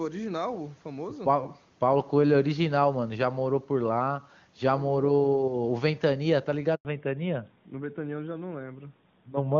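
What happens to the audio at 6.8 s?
At 6.75 s the speech cuts out for 100 ms, until 6.85 s. This is a handover gap. The call switched networks, and no speech frames arrived during the changeover. The voice drops to silence almost at once, and that stretch of speech is lost.

From 6.85 s to the end, a fallback to narrowband follows. The call has moved off HD Voice onto an older narrowband codec, and nothing remains above 4 kHz. The speech sounds duller and boxier, which fits AMR-NB at around 12.2 kbit/s.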